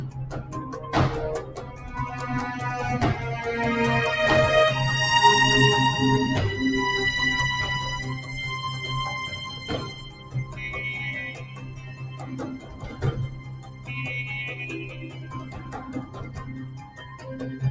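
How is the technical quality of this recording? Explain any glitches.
The recording suffers from level pumping and thinning that come from a speech noise suppressor processing material it was not designed for. The sound also has no content above 8 kHz, which is simply the band limit of the call's microphone path.

Across the whole clip, sharp attacks come through clearly while held tones, ambience and decays sag. The level swings by roughly 15 dB, so the sound flutters and loses body. This is a noise suppressor applied to music or sounds. Because it was built to separate speech from background, it treats steady and reverberant material as noise and turns it down. It eases off again whenever something sudden arrives.

In several stretches there is sound cut by the noise suppressor, where the level drops by about 6 to 7 dB beyond the general pumping. These occur at 1.46–1.84 s, 9.94–10.6 s, 11.34–12.36 s, 12.58–13.02 s, 13.29–13.9 s, 14.88–15.74 s and 16.05–17.23 s. 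In these passages, sustained or fading sound sinks and tails are clipped short, because the suppressor has judged that content to be noise and pulled it down harder.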